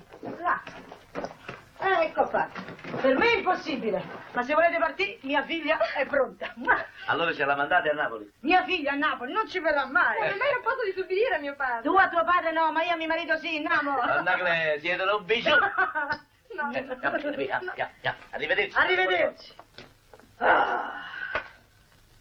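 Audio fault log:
No faults heard.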